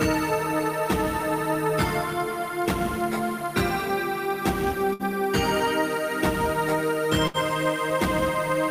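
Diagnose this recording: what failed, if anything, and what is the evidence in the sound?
The network path failed, with two bursts of packet loss at 4.93 to 5.02 s and 7.27 to 7.37 s. Each time the receiver concealed the gap by extending the last sound and fading it for roughly 60 ms, heard as a brief held buzz or fading hiss. The audio then resumes about 60 ms further on. That skipped stretch separates this from a buffer underrun or driver glitch, which inserts silence or a click and then continues without losing anything.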